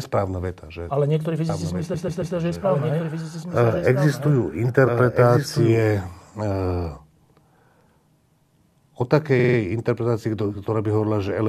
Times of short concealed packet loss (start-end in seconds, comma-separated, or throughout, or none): none